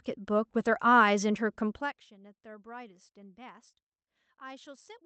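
At 3.69 to 3.75 s there is a short concealed packet loss. About 40 ms of the speech reached the decoder too late. The receiver patched the hole by extending the preceding sound for 35 ms, then blended back. It is heard as a brief smear.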